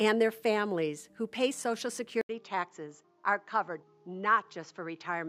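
At 2.21 s the sound drops out for about 80 ms, then returns duller and slightly quieter, with nothing above 7.6 kHz and a faint new noise floor. This is likely an input switched to a poorer device. The gap and changed background distinguish it from a simple filter change.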